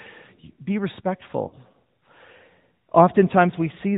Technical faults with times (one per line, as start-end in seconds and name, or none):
0.00-3.97 AMR narrowband mobile codec
1.48-1.56 lost AMR speech frames